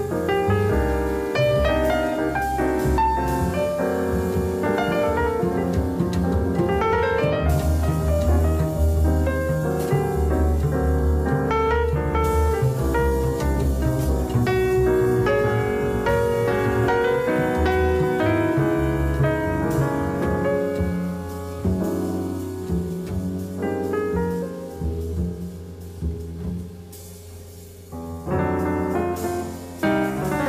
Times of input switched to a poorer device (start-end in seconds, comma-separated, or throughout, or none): none